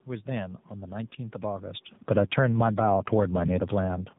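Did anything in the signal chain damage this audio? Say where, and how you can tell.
Yes. Throughout, the speech sounds rough, muffled and warbly, with nothing above 3.8 kHz. This is tandem speech coding at the codec stage: two AMR-NB passes, the second re-encoding the first's damage.

From 1.96 to 2.83 s, voice and background sink together by about 11 dB. Automatic gain falling in call processing is stepping its gain down after judging the input too loud.

From 2.74 to 3.43 s, both swell back by about 5 dB. Automatic gain rising is the same control now raising gain for input it judged too quiet.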